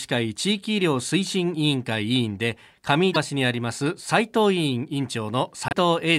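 A likely broken MP3 bit reservoir, where frames read borrowed data from missing neighbours, makes the speech skip ahead with a brief chirp, noise burst or gap at 3.12 s (44 ms) and 5.68 s (58 ms).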